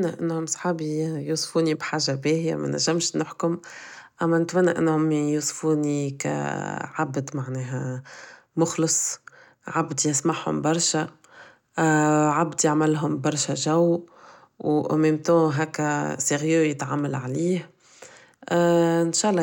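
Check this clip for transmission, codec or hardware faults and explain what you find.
Nothing stood out on listening through this speech recording.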